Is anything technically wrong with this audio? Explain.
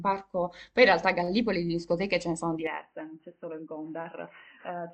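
Yes. At about 2.67 s the speech suddenly turns dull and boxy and stays that way to the end, with nothing above about 3 kHz. There's no gap at the change, the level drops by roughly 5 dB, and a faint new noise floor sits far below the speech. That's most likely an input switched to a poorer device: the system jumped mid-recording to another mic or a headset's call profile, whose narrow band cuts the top end.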